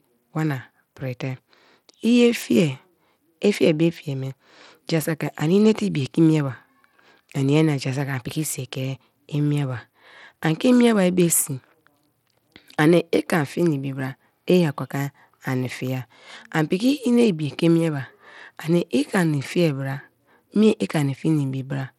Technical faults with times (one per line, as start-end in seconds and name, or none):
0.00-21.99 Bluetooth SBC compression